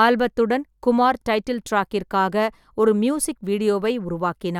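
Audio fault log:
No faults heard.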